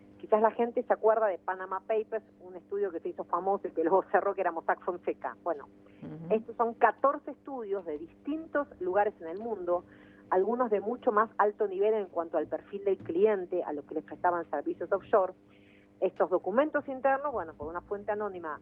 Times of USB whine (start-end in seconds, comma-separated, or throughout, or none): none